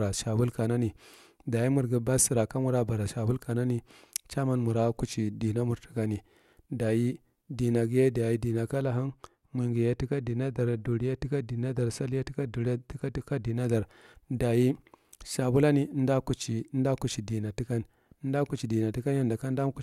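Speech, and from just after "dimaghiye daye dima" at 8.82 s until "dar daye shabulane" at 13.56 s it goes dull: de-emphasis applied wrongly, rolling the top off smoothly, about 8 dB down at 10 kHz.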